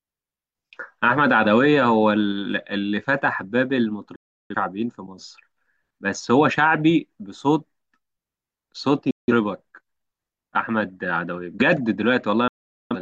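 Digital broadcast dropouts cut the speech at 4.16–4.55 s, 9.11–9.33 s and 12.48–12.96 s. The receiver muted on missing or corrupt frames with a 3 ms fade, so the sound snaps off and resumes later, losing 0.34 s, 0.17 s and 0.43 s of programme.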